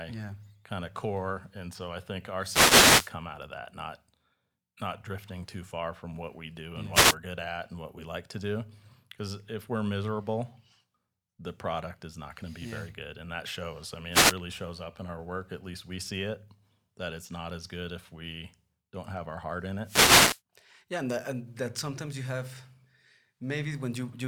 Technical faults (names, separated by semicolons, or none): wireless microphone noise hit